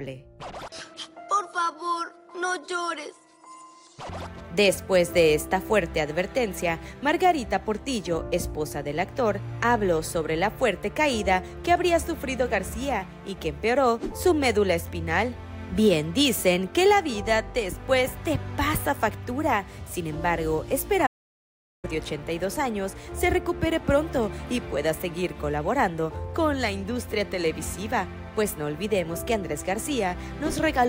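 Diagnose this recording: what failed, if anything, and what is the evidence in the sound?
There's a playback stall at 21.06 s: the sound cuts out mid-flow and stays silent for about 0.77 s, until 21.85 s, before carrying on. That's a playback-stage problem, most likely the player running dry of buffered data or its output thread getting blocked.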